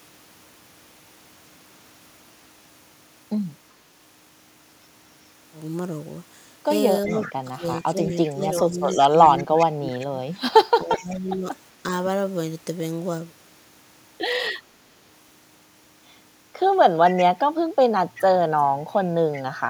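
A loudspeaker-side echo canceller has likely failed to remove all of its microphone pickup, producing echo leak from 7.06 to 9.66 s. A copy of the speech returns about 382 ms late, roughly 20 dB below the direct level. Shorter scraps recur at 10.96 to 11.03 s, 17.06 to 17.25 s (louder, near 15 dB down), 18.15 to 18.61 s and 19.32 to 19.42 s.

Overlapping with the first echo, speech suppressed in double talk runs from 7.06 to 10.21 s and again from 10.75 to 11.46 s. With both sides talking at once, the canceller likely cannot separate this talker from the echo and turns everything down. The speech dips and breaks by up to around 20 dB, then around 15 dB.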